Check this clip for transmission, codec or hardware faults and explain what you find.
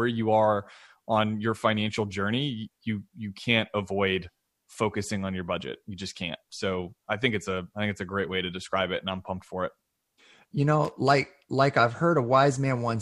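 A worn or dirty contact in the signal path produces loose connector crackle from 10.85 to 10.93 s, just before "like like I've". The contact repeatedly makes and breaks, chopping the speech, so the moment sounds like a brief irregular burst of scratchy crackle.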